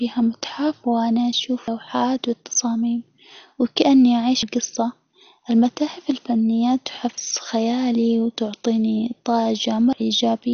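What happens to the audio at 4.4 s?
At 4.43 s the sound jumps abruptly forward, with about a third of a second missing. This is audio missing between chunks, most likely because the recorder processes audio in blocks and drops a piece at the handover between one block and the next. The timing fits blocks of about 3 seconds. Unlike a dropout, no silence fills the gap. The two sides butt straight together, so it sounds like a skip rather than a pause.

Running through this moment, as through the whole clip, is MP2 compression. The encoder is likely starved of bits, at a rate around 48 kbps. Nothing is heard above 6.5 kHz, so the sound is dull. The upper sub-bands that remain flicker on and off and are coarsely quantised, which gives a gurgling, granular texture. That texture separates it from a simple low-pass filter, which would dull the sound without the churning distortion.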